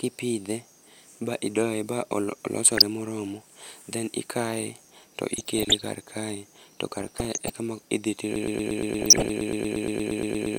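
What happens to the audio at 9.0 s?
At 9.0 s a broken-record loop is underway. From 8.36 s to the end, a 0.12 s fragment repeats 19 times, likely from a stalled stream, showing as identical waveform blocks. DAB burbling also runs from 8.99 to 9.32 s: bit errors in the MP2 data put wrong samples into single sub-bands, producing short blips of noise that appear as scattered isolated spectrogram patches.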